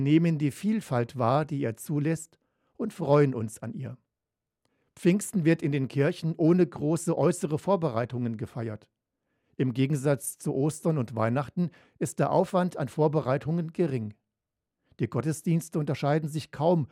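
No technical faults are audible.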